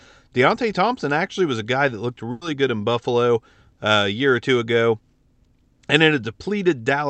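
At 2.31 s, right after "a guy that looked", a burst of packet loss cuts in. Roughly 0.1 s of audio never arrived, and the receiver filled the hole by stretching and fading the last sound, so a brief fill stands in before the speech resumes at 2.43 s on "good in", with that stretch of the utterance gone. On a spectrogram the concealed span shows a smeared, held copy of the last sound that dims toward the join, and the waveform's envelope sags there. The call path's band limit is visible as energy stopping near 8 kHz.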